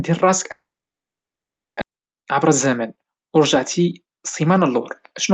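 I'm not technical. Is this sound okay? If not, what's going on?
No, two things go wrong in this speech.

From 0.51 to 1.83 s there is a long network dropout, likely from audio that never arrived. The sound trails off into a fading buzz and then silence, and resumes at "عبر الزمن" with a piece missing. A brief click or glitch would not leave this long a gap.

From 3.56 to 5.31 s a jitter buffer speed-up makes the talking run about 12% faster. Tiny slivers, about a fifth of a second in total, are trimmed away to cut a delay. The pitch stays natural, unlike a tape played too fast.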